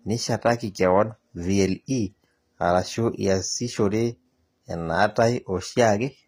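Speech whose treble sounds gritty and lispy on s sounds, with nothing above 15.4 kHz, likely HE-AAC compression rebuilding the top band, consistent with roughly 24 kbps.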